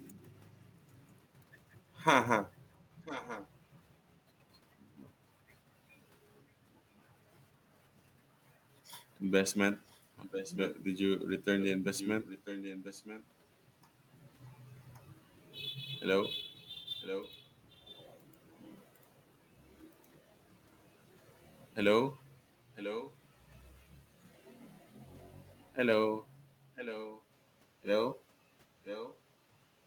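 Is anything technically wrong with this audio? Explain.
Yes, there is an echo leak: at 0.94–1.14 s, 3.04–3.49 s, 9.87–13.26 s, 16.57–19.72 s, 22.75–23.16 s, 25.63–27.24 s and 28.84–29.19 s, a copy of the speech returns about 0.99 s late. It is likely a far-end loudspeaker echo that the echo canceller failed to remove. The copy is faint at first (about 40 dB down), then louder, about 10 to 15 dB below the speech. Unlike room reverberation, it is a distinct repeat rather than a smeared tail.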